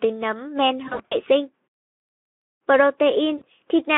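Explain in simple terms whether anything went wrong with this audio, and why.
Yes, two spots glitch. Right after "nấm men", from about 0.87 to 1.18 s, VoIP packet loss concealed by the speech codec kicks in: chunks go missing, and the decoder stretches the last bit of speech into a fading buzz or hiss. It happens again at 3.37 to 3.44 s.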